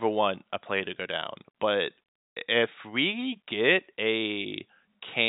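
No faults detected; the speech is carried over G.711 telephone coding, with nothing above about 3.8 kHz.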